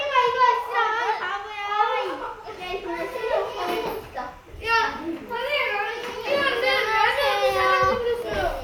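Everyday sounds run the full clip with timecode bleed beneath them: a faint chirping warble, roughly 35 dB down, flipping between pitches near 1 and 2 kHz at a 29.97 frames-per-second rhythm. Unlike a steady whistle or hum, it keeps switching pitch, because linear timecode from a neighbouring track or cable is leaking in.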